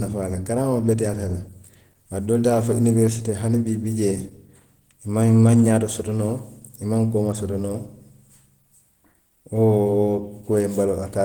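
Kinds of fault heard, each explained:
Opus compression: Throughout the clip, the speech carries a plainly audible hoarse, muffled and grainy quality, likely from Opus coding at a low bitrate that fits about 16 kbps. The lower band sounds coded as speech, while the upper band seems rebuilt from band energies with folded or noise-filled detail, which points to the hybrid mode. Content still reaches about 20.1 kHz, so the roughness comes from coarse filling rather than a narrowed bandwidth.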